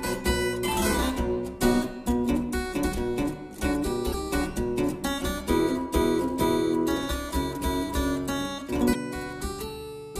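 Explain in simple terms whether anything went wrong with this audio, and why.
Two short glitches, at 4.12 s and 8.92 s, each about 30 ms, likely a broken MP3 bit reservoir: after missing data, the next frame reads another frame's bytes.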